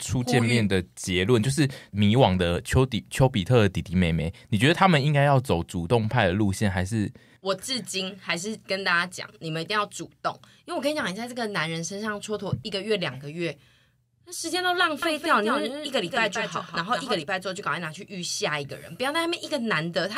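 From 15.02 to 17.22 s the sound is heard twice: a doubled audio track, with a second full-band copy trailing about a fifth of a second behind and only a few decibels quieter. It likely comes from the signal being captured again through a slower path. Unlike room echo or reverb, the copy does not decay, carries no room colour and does not repeat. It switches on and off abruptly at those two times.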